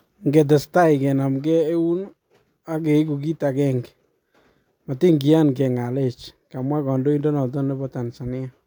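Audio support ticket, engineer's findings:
No audible faults found.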